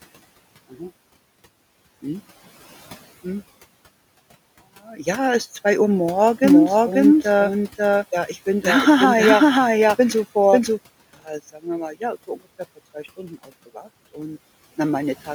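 A speech recording with two faults. From 6.44 to 10.78 s there is a doubled audio track: a second full-band copy of the speech runs about half a second behind the original at roughly the same level, so every syllable is followed by a clean, uncoloured repeat with no decay or room character. The copy enters and leaves abruptly at those two points. The likely cause is the signal being picked up a second time through a slower path and mixed back in. Between 11.25 and 11.66 s, just before "wir mal", the speech is cut by the noise suppressor. The suppressor treats parts of the quieter speech as noise and pulls them down by as much as about 16 dB, together with the room noise that sits about 24 dB below the speech. In total about a fifth of a second is affected, and those fragments sound faint and swallowed.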